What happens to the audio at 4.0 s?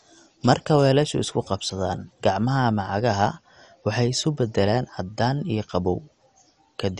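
At 4.0 s the speech carries the same dull, gurgling, granular quality heard throughout the clip. This points to MP2 compression, likely at a low rate around 48 kbps. The coder splits the signal into 32 sub-bands and shares out too few bits. Upper bands are switched off, leaving nothing above about 11.3 kHz. The bands that remain are coarsely quantised and flicker on and off, which produces the watery texture.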